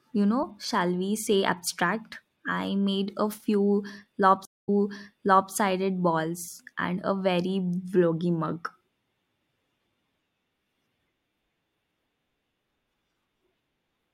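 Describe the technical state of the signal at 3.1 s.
At 3.1 s the speech signal is intact, with no audible fault at that moment.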